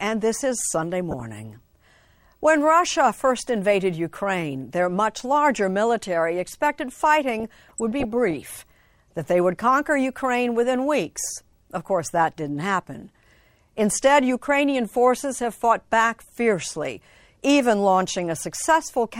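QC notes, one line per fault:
1.11–1.20 s, 7.40–8.33 s (after "much larger military expected") and 9.10–9.13 s (before "that they would conquer"), DAB burbling: weak reception lets roughly 0.2–0.3% bit errors past error correction, corrupting MP2 samples and producing short noise blips in single sub-bands over the speech.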